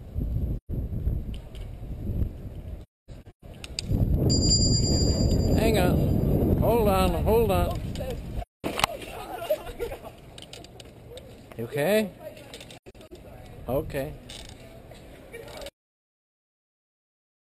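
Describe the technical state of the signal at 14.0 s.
At 14.0 s the signal is intact, with no audible dropout, distortion or other technical fault at that point.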